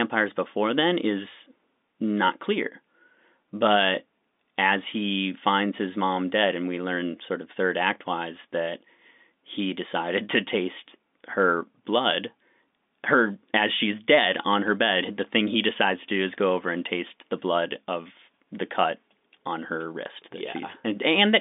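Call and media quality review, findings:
No faults found in this speech recording.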